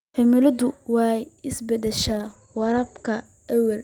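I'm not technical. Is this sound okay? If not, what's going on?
No. From about 1.99 to 3.31 seconds the speech turns muffled and rough, as if heard through a wall. That's a call bitrate drop: the connection briefly squeezed the audio into far less data, so finer detail and crisp high sounds were lost.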